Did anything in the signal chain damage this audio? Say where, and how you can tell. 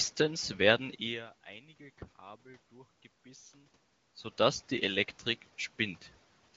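No, nothing in this speech stood out on listening as damage from any stage of the signal chain.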